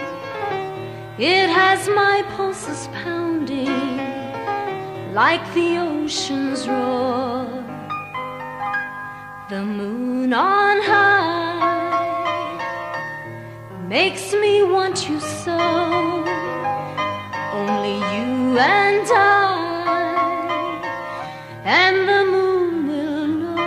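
Nothing here calls for comment, since no technical fault turns up anywhere in the audio.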